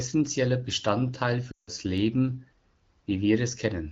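From 1.52 to 1.70 s, lost AMR speech frames leave a short gap. The decoder repeats the last sound with falling gain, so it smears and fades out quickly. The speech then returns weakly.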